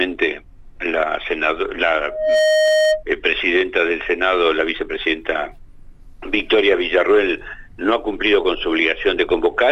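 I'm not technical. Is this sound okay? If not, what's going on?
No. There is loudspeaker feedback squeal from about 2.04 to 3.03 seconds. A microphone was picking up the loudspeaker it was feeding, and one pitch kept looping round and growing louder each time. You hear a single steady tone, around 620 Hz (roughly a high hum), swell up within about a third of a second and ring over everything, louder than the rest of the sound, for about a second before it stops.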